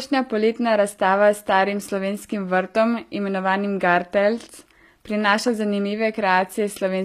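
Speech runs through the whole clip with gritty, metallic s sounds and treble that sounds synthetic, with nothing above about 14.9 kHz. This is likely HE-AAC compression at a low bitrate around 24 kbps, where spectral band replication rebuilds the upper band from copied lower bands.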